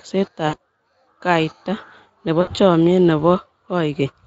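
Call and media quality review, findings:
VoIP packet loss concealed by the speech codec at 0.47–0.56 s and 2.41–2.53 s: sound stretches into a fading buzzy tone or coloured noise rather than a silent gap. About 60 ms lost each, which fits three 20 ms Speex frames.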